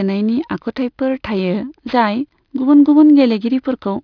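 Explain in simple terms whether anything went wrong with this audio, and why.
Aliasing runs through the whole clip. The speech was squeezed into a lower sample rate, which fits a drop to about 11 kHz, without first removing the high sounds. Anything above 5.5 kHz folds back as false tones, so hissy sounds turn gritty and metallic.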